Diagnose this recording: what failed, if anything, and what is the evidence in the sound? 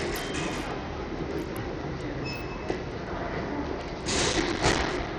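The codec stage is the first problem. Throughout the clip the treble thins out and flickers, with a gritty, grainy noise and aliasing riding on the sounds. On a spectrogram the top band looks patchy, switching on and off in blocks, and the level drops in steps across a few wide frequency bands. This is likely Bluetooth SBC compression at a starved bit pool, which fits a low bitrate of around 80 kbps.

A second fault sits at the driver or buffer stage. From 4.33 s to 5.07 s a burst of processor overload crackle tears through the sound and stops before the end. The processor missed many deadlines for small buffers of about 5 ms, dozens of them, and each miss was played as a short silence with hard edges. On the waveform this appears as a dense run of tiny dropouts, and the spectrogram shows matching vertical broadband clicks.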